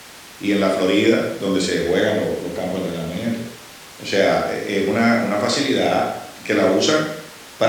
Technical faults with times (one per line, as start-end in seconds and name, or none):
none